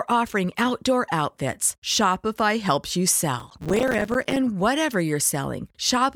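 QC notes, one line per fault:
3.40–4.37 s, processor overload crackle: around 50 missed deadlines drop tiny slivers of silence, which fits buffers of roughly 5 ms, into the speech, heard as gritty tearing.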